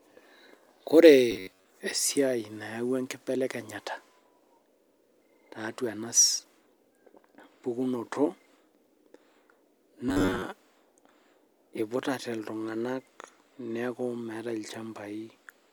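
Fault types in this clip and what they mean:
Robotic sound from repeated short buffers: Speech becomes a rigid metallic buzz at 93.8 Hz, likely an 11 ms block looped. The spectrogram shows even harmonic stripes and the waveform a repeating shape.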